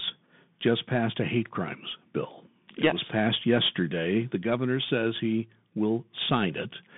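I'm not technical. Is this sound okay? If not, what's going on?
No. The speech went through a Bluetooth CVSD headset codec, a low-quality phone-call link, throughout. It cuts everything above about 3.7 kHz, leaving muffled, scratchy s sounds and a grainy hiss.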